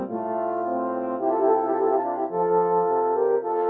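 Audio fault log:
Throughout: noise suppressor applied to music or sounds. Sustained parts of the sound keep sinking and recovering, so held material pumps and thins while onsets mostly come through, a level swing of around 5 dB. A suppressor tuned for speech is treating steady tones, ambience and decay as background noise and pulling them down between attacks. Separately, the top end stops near 8 kHz, as the call path's bandwidth allows.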